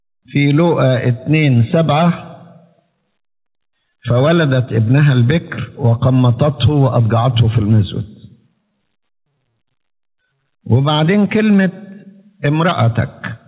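Gain pumping runs through the whole clip. The gain ducks under each loud sound, by around 5 dB. Levels sound squashed together. The likely cause is input gain set too high, with a fast limiter clamping down. The band stops at 4 kHz, which fits a G.711 A-law call codec.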